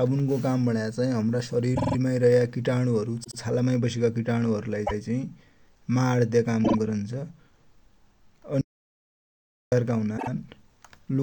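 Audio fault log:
1.74 s, 3.23 s, 4.86 s (just after "हरु लाइ"), 6.64 s, 10.17 s: repeated frames. Short blocks of 48 to 144 ms replay one to four times, which fits duplicated compressed frames. The result is a rhythmic stutter. Unlike a dropout, nothing is lost and the audio simply grows longer.
8.61–9.72 s: audio dropout to silence. For about 1.1 s the signal falls to silence with no room tone, which is what separates it from a quiet pause. Speech cuts off mid-flow and the missing material is gone, likely from a lost input link.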